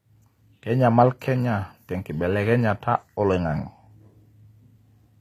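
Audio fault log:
Throughout: HE-AAC compression, likely, and plainly audible across the speech. The top end sounds bright but synthetic, with s sounds coming out gritty and lispy, because the treble is rebuilt from copied lower bands rather than coded, which fits a low bitrate around 24 kbps.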